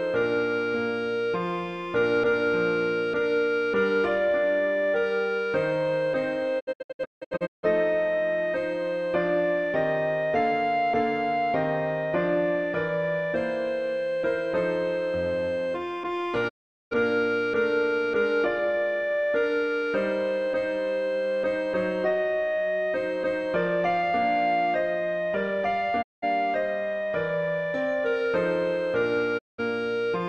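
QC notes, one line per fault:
6.59–7.65 s, digital broadcast dropout: the sound breaks into several short muted holes over about a second, the longest about 160 ms, with around 670 ms missing in all. Each hole fades out and back in within 20 ms. The receiver was failing to decode frames and muted until good ones returned, which points to lost frames of about 32 ms each.
16.48–16.93 s, 26.01–26.24 s, 29.37–29.60 s, digital broadcast dropout: each is a single clean gap, about 420 ms, then 190 ms and 190 ms, with quick 20 ms fades at both edges. The receiver muted through the bad frames, so the audio broadcast during each gap is lost.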